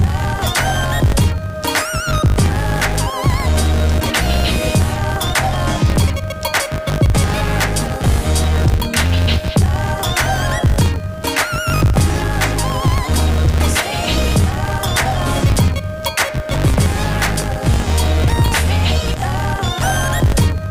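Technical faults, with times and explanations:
Throughout, filter restarted on every block: a steady 50 Hz buzz sits under the sound, rising and falling with its level. The filter loses its memory at each block boundary and restarts from silence, leaving a small click every 20 ms.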